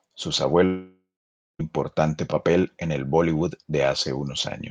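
At 0.65 s the speech breaks off and the last sound is stretched into a buzzy, fading tail, which decays into about 0.52 s of silence before speech returns at 1.61 s with roughly 0.94 s simply gone. This is likely a long network dropout, with the receiver concealing the gap until it gave up. The decaying smear followed by dead air, and the skipped material, set it apart from a brief packet-loss glitch or a clean mute.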